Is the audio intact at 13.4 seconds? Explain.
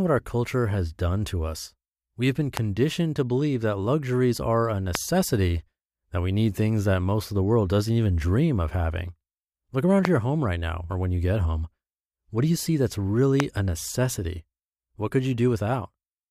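No. A loud pop at 13.40–13.42 s, likely a voltage pulse from a switch or static, rises about 20 dB above the speech, which carries on beneath it.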